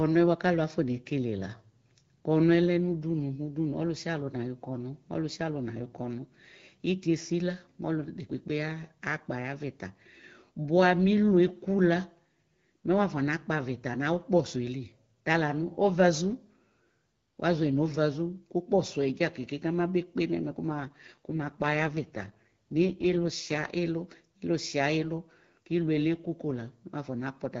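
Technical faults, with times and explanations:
20.68 to 23.70 s, AMR rate drop: right after "kpe nɛ mɛ" the speech turns rougher, more synthetic and raspy, then clears up again. The bandwidth holds steady and nothing drops out. That points to the link weakening and the network pushing the wideband codec from about 12.65 kbit/s, where it sounds clean here, down to something like 6.6 kbit/s, trading speech detail for error protection until conditions recover.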